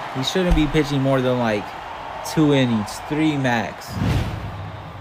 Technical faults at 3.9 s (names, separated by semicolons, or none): none